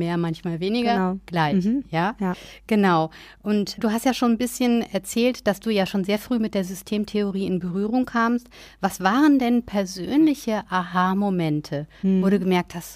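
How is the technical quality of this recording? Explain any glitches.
Nothing in this speech recording comes across as a glitch, so there's really nothing to explain here.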